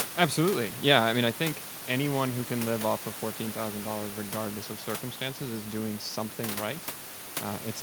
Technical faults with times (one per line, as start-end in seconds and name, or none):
none